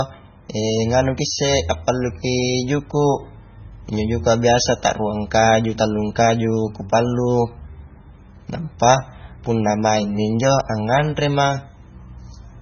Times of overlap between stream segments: none

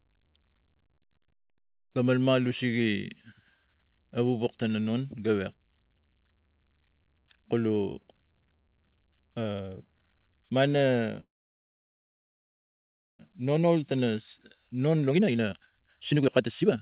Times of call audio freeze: 11.20-13.21

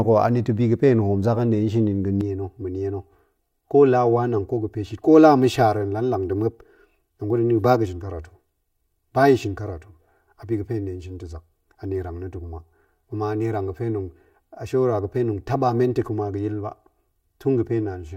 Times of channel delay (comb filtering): 2.21-18.16

